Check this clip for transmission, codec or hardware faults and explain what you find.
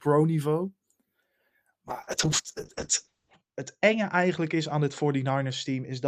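One fault is present: a call bitrate drop from 1.88 s to the end. The bandwidth estimate fell and the encoder was starved of bits, which fits a drop from 32 kbps to 6 kbps. Coding turned coarse and the audio band narrowed from 20 kHz to 8 kHz, so the speech sounds muffled and rough, worst for about 1.5 s.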